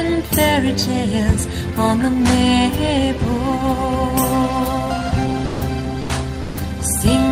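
At 5.47, 6.03 and 6.43 s, the sound gives way to steady noise or near silence for 120, 40 and 120 ms, likely sound dropped by the voice detector.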